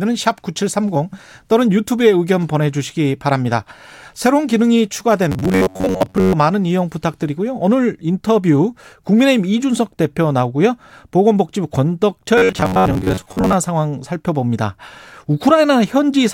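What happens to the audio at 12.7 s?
From 12.38 to 13.54 s, robotic sound from repeated short buffers: a rigid 94 Hz metallic buzz, likely from 11 ms chunks looping, unlike a smooth pitch shift.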